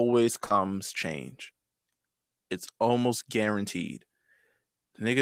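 Speech with short concealed packet loss near the start, spanning 0.45 to 0.53 s with a second gap inside it at 0.49 to 0.52 s. Each drop removed about 20 ms, which the decoder bridged by extending the preceding sound, the first adding roughly 10 ms, leaving a brief smeared wobble.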